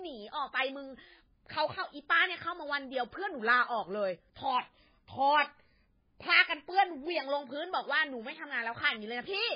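From start to finish, the speech carries heavy damage of the kind MP3 compression leaves, likely from an encoder starved of bits, which fits a very low bitrate around 16 kbps. With so little to spend, the encoder discards everything above 5 kHz and drops weaker frequency lines that flicker in and out between frames. The result sounds dull and muffled, with a watery, swirling texture, metallic chirps on s sounds, and smeared consonant onsets.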